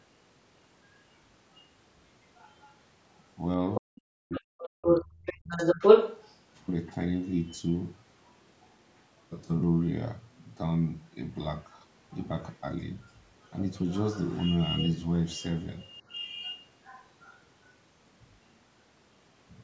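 At 1.55 s and again from 2.36 to 2.75 s, a second voice leaks through very faintly, far below the talker. This is the other side's voice leaking through, likely echo from the loudspeaker that the canceller failed to remove. Unlike a dropout, this adds a voice that shouldn't be there. From 3.75 to 6.37 s it becomes louder than the talker.

Within that stretch, from 3.8 to 5.57 s, the talker's own voice is speech suppressed in double talk. For roughly a second and a half in pieces, it dips by as much as about 40 dB, likely because the canceller turned down both voices together. Here the talker loses level, while the leaking voice adds sound on top.

The leak returns quietly from 7.5 to 9.22 s, then more audibly from 11.63 to 17.39 s, though still below the talker.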